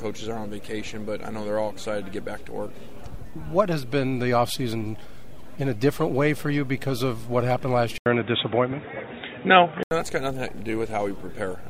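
At 7.98 s, after an 80 ms silence, the sound turns dull and boxy, with nothing above 3.8 kHz, a modest level change and faint new background noise, until 9.91 s. The silence and changed noise suggest the input likely switched to a poorer device, rather than simple filtering.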